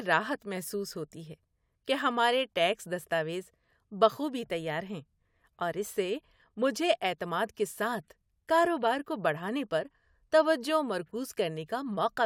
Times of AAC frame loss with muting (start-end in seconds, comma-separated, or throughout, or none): none